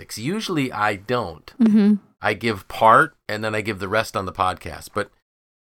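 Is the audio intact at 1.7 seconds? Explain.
No. A loud pop hits from 1.66 to 1.69 s, after "I don't": a single voltage spike, likely from a plug or switch, thumps well above the speech, which continues underneath.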